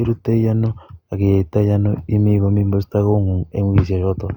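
A short speech recording with no technical faults audible anywhere in the signal.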